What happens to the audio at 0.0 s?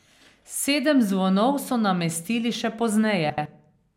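Nothing goes wrong at 0.0 s; the speech is intact at that moment.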